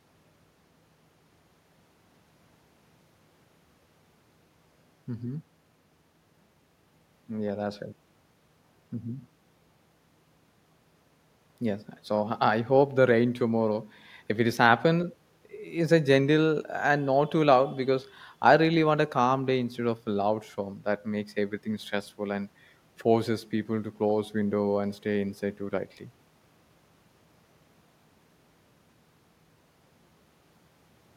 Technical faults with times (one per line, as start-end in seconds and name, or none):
none